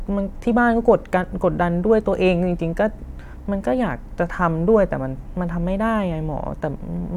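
Speech recording with no audible technical faults: no dropouts, clipping, glitches or distortion events anywhere in the clip.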